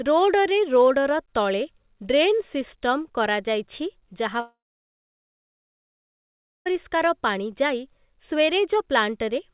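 After "କରାଯାଇଛି ଯାହା", from 4.4 to 6.68 s, a long network dropout is the likely cause: a brief fading buzz, then about 2.1 s of flat, empty waveform and blank spectrogram before the speech resumes.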